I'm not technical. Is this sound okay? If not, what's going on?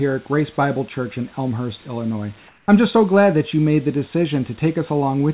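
No. From 2.48 to 2.68 s, just before "I'm just so glad", the call system most likely decided nobody was speaking and briefly stopped sending the real audio. The receiving end filled that fifth of a second with made-up hiss, which is called comfort noise in place of the background. So the natural room sound drops out and is replaced by a flat, quieter hiss until the speech returns.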